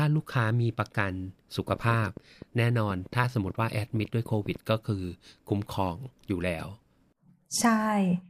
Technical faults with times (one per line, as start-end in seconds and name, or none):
1.68-4.57 train of clicks